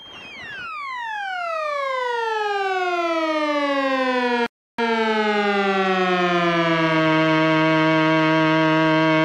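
A recording of everyday sounds with one rebuffering stall: at 4.46 s the audio drops to silence for 0.32 s, then picks up exactly where it stopped.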